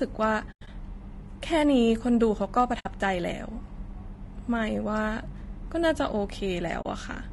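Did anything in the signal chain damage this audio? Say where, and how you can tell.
Yes. Two stages left marks. The codec is the first: the speech has a rough, grainy texture from start to finish, with noise filling the gaps between voice harmonics and a thin, somewhat synthetic top band. This is plainly audible codec damage. The likely cause is low-delay AAC compression, AAC-ELD at a low rate around 32 kbps. Its short frames resolve pitch harmonics poorly, and at this low rate too few bits remain for the tonal detail.

The second is in transmission or decoding, where the dropouts are AAC frame loss with muting. Holes with soft fade-out and fade-in edges appear at 0.51 to 0.68 s, where gaps are scattered over 160 ms with the longest lasting about a tenth of a second, at 2.79 to 2.86 s (60 ms), and at 6.81 to 6.86 s (40 ms). The decoder zeroed the missing spectra, and the overlapping windows smoothed the edges. 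The gap lengths fit 20 ms frames.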